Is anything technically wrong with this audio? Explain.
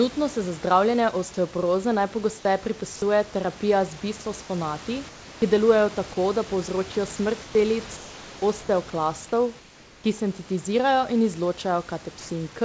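Yes. The call's voice detector likely misjudged speech as background and stopped sending at 2.96–3.02 s, 6.92–6.95 s and 12.20–12.29 s. This is sound dropped by the voice detector: each brief piece of speech, 30 to 80 ms, is replaced by flat synthetic noise.

Comfort noise replaces the background at 5.09–5.42 s, 7.43–7.55 s, 7.97–8.42 s and 9.59–10.04 s. During these pauses the sender likely stopped transmitting, and the receiver filled the gaps with generated noise. The real room background becomes a smooth, featureless hiss about 2 to 3 dB quieter.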